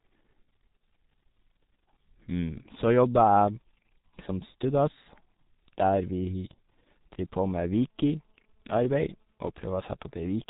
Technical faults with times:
0.00-10.49 G.723.1 codec

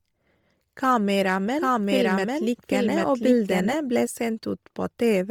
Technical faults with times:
0.00-5.31 Bluetooth LC3 compression
1.55-3.73 doubled audio track

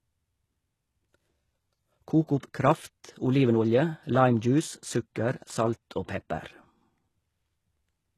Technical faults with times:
0.00-8.18 HE-AAC compression
2.27-2.43 pre-echo

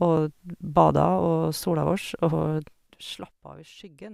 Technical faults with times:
2.52-3.50 zipper noise

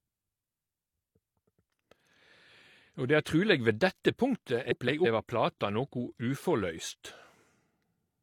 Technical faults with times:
4.71-5.06 frames out of order

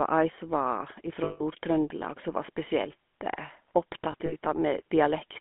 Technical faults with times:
0.00-5.41 GSM full-rate codec
1.24-1.43 lost GSM frames
4.12-4.34 lost GSM frames

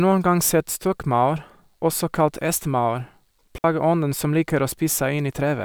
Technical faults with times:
3.58-3.64 digital wireless dropout

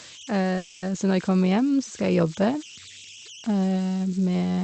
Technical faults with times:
0.00-4.63 converter idle tones
0.57-0.84 call audio freeze

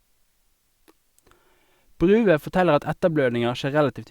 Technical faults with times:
none

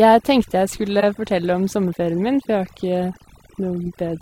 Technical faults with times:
0.00-4.21 overdone noise removal
1.00-1.03 corrupt frame decoded
3.84-3.88 corrupt frame decoded

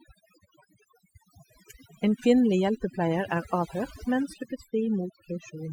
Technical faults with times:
0.00-5.72 overdone noise removal

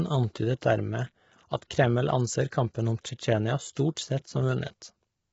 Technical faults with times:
0.00-5.32 low-delay AAC compression

